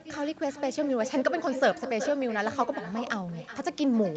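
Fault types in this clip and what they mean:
Echo with no canceller: the far end's loudspeaker feeds its microphone, so every phrase returns roughly 0.4 seconds later, about 10 dB down and thinner.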